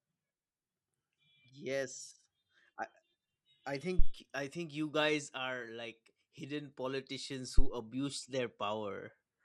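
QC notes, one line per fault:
Throughout: MP2 compression. The speech sounds dull and gurgling, with a granular roughness. This is likely MPEG Layer II coding at a starved bitrate, which fits about 80 kbps. Too few bits leave the upper sub-bands switched off or flickering, and the remaining bands are coarsely quantised. On a spectrogram the top end cuts off in a ragged, blocky ceiling, with patches appearing and vanishing from frame to frame.
3.99–4.11 s and 7.58–7.72 s: phantom power thump. Each is a deep, low thud lasting about an eighth of a second, dying away in roughly 26 ms and 30 ms respectively. A supply switching on a live input sends a voltage step through the coupling capacitors, and that step is heard as a single low-frequency shove. On the waveform each appears as a one-sided excursion with a rapid exponential return, and on the spectrogram as a short dark smear at the bottom.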